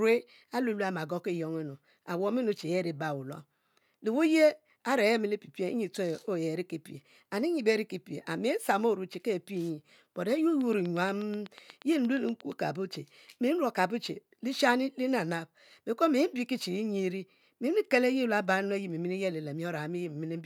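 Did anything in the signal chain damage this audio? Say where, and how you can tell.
Yes: a train of clicks from 10.61 to 12.53 s, about fifteen evenly spaced ticks at 8.4 per second, peaking about 5 dB above the speech. This is likely interference in the analogue wiring or interface, not codec dropouts.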